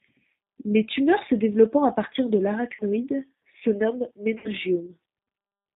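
Speech here has been carried through the G.729 codec at 8 kbit/s, a low-rate VoIP coder that resynthesises the signal from a vocal tract filter, a pitch predictor and a handful of pulses per 10 ms frame, and cuts everything above 4 kHz. The damage is plainly audible throughout: the voice is band-limited and muffled, with a slightly rough, synthetic texture typical of the G.729A variant. Two stretches also suffer VoIP packet loss concealed by the speech codec. Packets went missing and the decoder filled the gap by extending its last pitch and filter state while reducing gain. The first, from 2.75 to 2.84 s just after "développant à partir de", covers about 40 ms of lost audio, which fits two dropped packets. The second, from 4.38 to 4.49 s after "se nomment", covers about 60 ms, consistent with three packets. In each gap the sound is stretched out and fades, and because every frame builds on the previous one, the voice stays weak and distorted briefly after the stream resumes.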